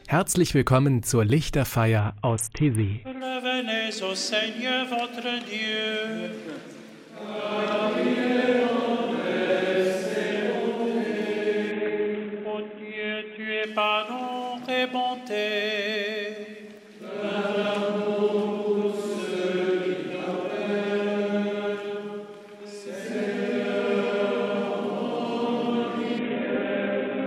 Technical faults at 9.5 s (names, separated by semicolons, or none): none